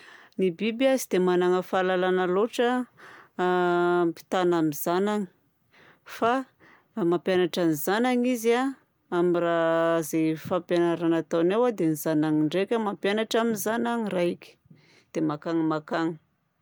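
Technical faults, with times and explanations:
No technical faults can be heard anywhere in this speech.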